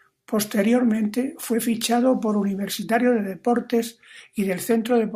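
A speech recording with nothing technically wrong that can be heard anywhere in it.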